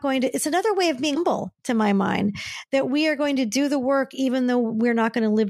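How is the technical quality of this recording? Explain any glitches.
There is one glitch, between 1.14 and 1.17 s, after "another way of" and before "to my mind that". The likely cause is a broken MP3 bit reservoir: frames went missing, so the next frame drew its borrowed bits from the wrong bytes. The result is a brief glitch, roughly one 24 ms frame long, where the speech jumps forward.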